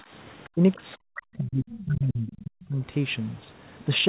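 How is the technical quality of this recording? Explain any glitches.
The recording has clear echo-control faults: the speech is repeatedly pushed down while another voice is active, and faint fragments of that other voice come through. The audio is band-limited, with nothing above 4 kHz, which points to a narrowband call codec such as G.711 A-law.

Speech suppressed in double talk occurs briefly from 0.01 to 0.13 s, with a dip of roughly 10 dB, then over a long stretch from 0.54 to 2.83 s, where about two seconds of speech are attenuated by as much as roughly 40 dB. The likely cause is an echo canceller that could not separate the local talker from loudspeaker echo while both sides spoke, so it ducked everything. The voice sinks, dulls or drops out in pieces.

The other side's voice leaking through is heard at 0.44 to 0.48 s, very faint at roughly 30 dB below the speech, and again at 1.7 to 1.85 s and 2.28 to 2.36 s, at roughly 20 dB below. 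These are short scraps of a second voice. They likely come from far-end audio played on the device's loudspeaker, picked up by the microphone and not fully cancelled.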